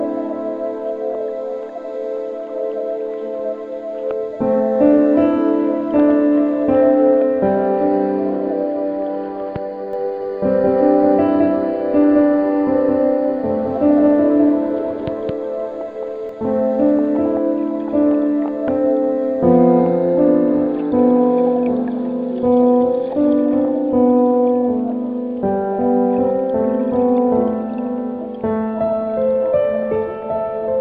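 From 9.93 s to 16.29 s the sound has a doubled audio track: a second full-band copy runs about a fifth of a second behind the original and at roughly the same level. This is likely a second capture through a slower path, or an edit holding two copies out of step. Unlike an echo or reverb, the copy has no decay and no room colour, and it cuts in and out abruptly at those times.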